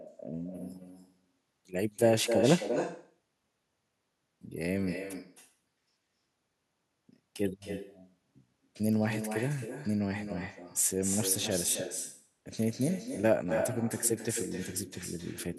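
Throughout the speech, echo with no canceller: the far end's loudspeaker feeds its microphone, returning each phrase roughly 300 ms later, about 7 dB quieter and thinner. Unlike room reverberation, it is a distinct, delayed copy, not a smooth decaying tail.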